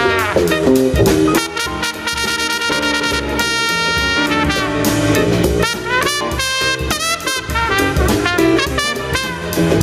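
Gain pumping runs through the whole clip, with the gain swinging by around 20 dB. The likely cause is input gain set far too high, with a fast limiter clamping down on peaks and squashing the dynamics.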